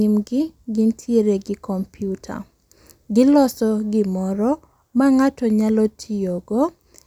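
A speech recording with nothing technically wrong with it.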